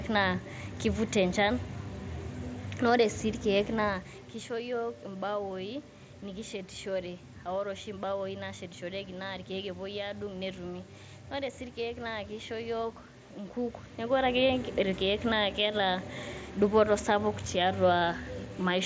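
No technical faults can be heard in this recording.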